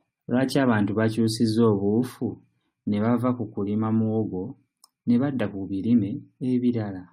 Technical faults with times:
none

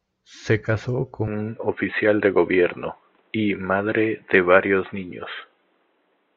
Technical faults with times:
1.27-6.36 input switched to a poorer device

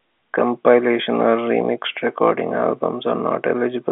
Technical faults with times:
none

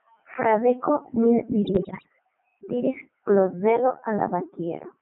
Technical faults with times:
0.00-5.02 Codec 2 vocoder
1.66-2.08 bit errors on digital voice radio

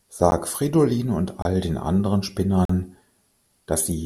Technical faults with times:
0.31 block of digital silence
1.42-1.45 block of digital silence
2.65-2.69 block of digital silence

